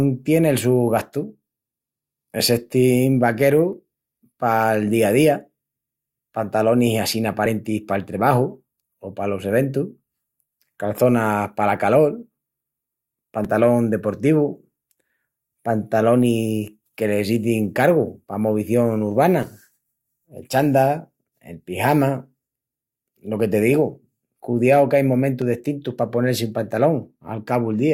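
Overlap between stream segments causes tiny skips in this speech at 7.46 s (after "pantalonis assín"), 13.45 s, and 25.42 s (between "digu cudiau que ain" and "destintus pa"), where overlapping time stamps at 6-second segment boundaries make the player discard a few milliseconds of real audio and the waveform jumps.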